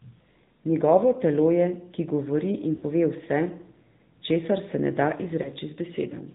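The whole clip runs through the AMR narrowband mobile codec. Nothing above 4 kHz gets through, so the speech sounds boxed-in and telephone-like, and there's a clearly audible buzzy, synthetic edge that fits a mid-range mode around 10.2 kbps.

At 2.76 s there are lost AMR speech frames. The decoder carries the last pitch and vocal-tract shape forward while the level sinks, so for roughly 60 ms up to 2.84 s the speech smears and dips, which fits about three dropped frames. A shorter one at 5.42 s to 5.49 s gives a quick warbly dip of about 20 ms, consistent with a single lost frame.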